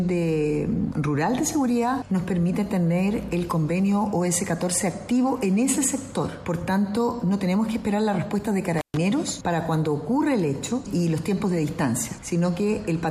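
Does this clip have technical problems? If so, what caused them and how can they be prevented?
Yes. There is an intermittent contact fault from 8.78 to 8.97 s. A loose cable or plug briefly loses its connection. The sound drops out for about 131 ms. Crackle marks the moments the contact breaks and then reconnects. While the circuit is open, faint hiss remains. To prevent it, check and reseat every connector, replace worn cables, and secure them so they cannot shift during recording.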